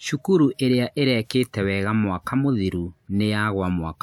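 Speech recording with no technical faults to report.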